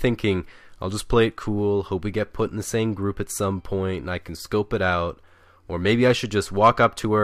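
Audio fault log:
No faults detected in this speech recording.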